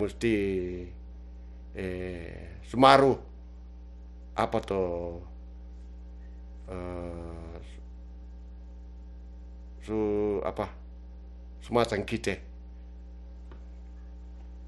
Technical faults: mains hum

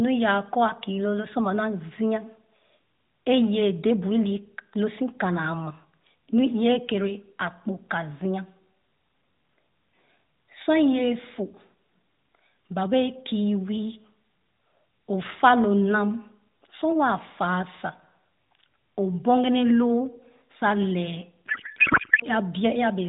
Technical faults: codec payload misread

